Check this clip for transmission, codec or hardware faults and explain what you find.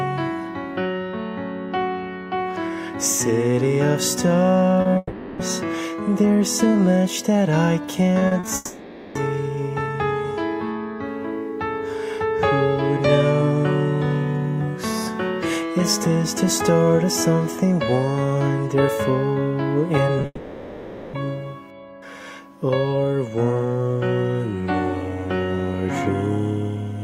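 The clip has three kinds of transmission fault, all typical of audio sent over a lossy network.

Short concealed packet loss occurs at 4.81 to 4.87 s (about 40 ms missing), 4.93 to 4.97 s (20 ms) and 20.21 to 20.25 s (20 ms). Audio packets arrived too late for the decoder. The receiver bridged each hole by extending the preceding sound and then crossfading back into the real signal. Each one is heard as a brief smear or wobble where a sliver of sound is gone.

Long network dropouts follow directly at 4.97 to 5.41 s, at 8.55 to 9.17 s, and after the 20.2 s glitch from 20.25 to 21.15 s. They last about 420, 600 and 880 ms. The cause is likely a stall in the network path during which nothing reached the receiver. In each gap the last sound is stretched into a fading buzz or hiss, with at most a few tens of milliseconds of true silence. The audio then resumes with the missing stretch simply gone.

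Repeated packet loss (robotic sound) runs from 8.19 to 8.45 s, just before the second dropout. The link lost packets three times in quick succession, the longest gap being 40 ms. Concealment patched about 100 ms, or roughly 38% of that quarter second. Because each repair ran straight into the next loss, the passage sounds choppy, with fragments missing.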